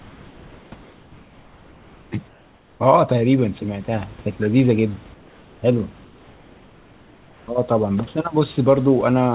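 Comfort noise in place of the background fills five pauses: 0 to 0.72, 0.82 to 2.12, 2.28 to 2.8, 5.14 to 5.62 and 6.04 to 7.48 s. The real room noise gives way to a steady, featureless hiss about 2 to 3 dB quieter, likely because discontinuous transmission halted sending during silence. Unlike a noise gate, the gaps never drop to true silence. The noise lacks room detail, and everything sits below 4 kHz.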